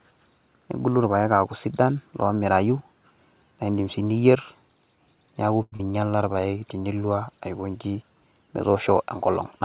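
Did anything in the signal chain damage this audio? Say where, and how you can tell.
Yes. At the network and jitter buffer stage, a short stall from a late packet hit at 5.62 to 5.74 s. The buffer ran dry, so the receiver held the last sound for about 100 ms until the packet turned up. Nothing is lost, but that sound hangs unnaturally long.

Right after, at 5.76 to 5.81 s, comes a skip ahead. Roughly 70 ms of speech was dropped, either on the way or by the buffer when it overflowed, while later audio was already waiting. Playback jumps forward, and the audio on either side of the cut is joined almost seamlessly.

From 5.92 to 6.34 s the jitter buffer slow-down follows. Running low, or having just raised its target delay, it repeated single pitch periods over and over to regain margin, adding 58 ms. The speech plays at about 88% speed with unchanged pitch, so sounds are drawn out.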